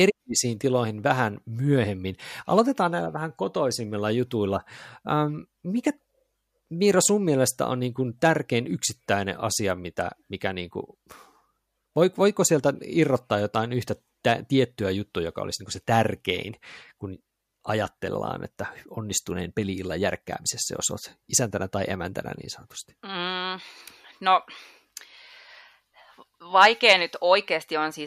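Nothing stood out as a technical fault on listening to the speech in this recording.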